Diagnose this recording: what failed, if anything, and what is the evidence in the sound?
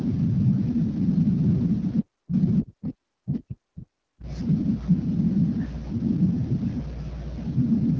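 Codec stage: AMR wideband (HD Voice) coding throughout, with nothing above 7.1 kHz and a rough, raspy texture pointing to a low rate near 8.85 kbit/s, not bandwidth-limiting filtering.

Call processing: the speech drops deeply, by around 40 dB, from 2.01 to 2.34 s and from 2.62 to 4.26 s. This is likely speech suppressed in double talk, with the echo canceller gating it rather than network dropouts.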